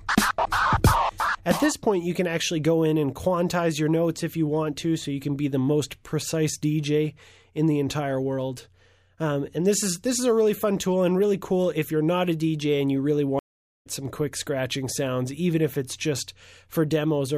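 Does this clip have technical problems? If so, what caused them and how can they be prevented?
Yes. A stream reconnect occurs from 13.39 to 13.87 s. The connection dropped, leaving about 0.46 s of dead silence, and a fresh decoder picked the stream up roughly 0.3 s further on, so a short stretch of audio is skipped. A waveform shows a flat gap with a restart that fades in, and a spectrogram shows a blank vertical band. A larger client buffer with automatic resume from the last received position would prevent this.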